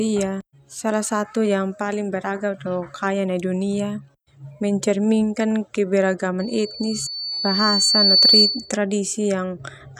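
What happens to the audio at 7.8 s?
At 7.8 s a loudspeaker feedback squeal is sounding, running from 6.39 to 8.72 s: a pure 4.5 kHz tone that swells over about two seconds to roughly 10 dB above the speech. On a spectrogram it forms one bright horizontal line; the waveform envelope grows steadily.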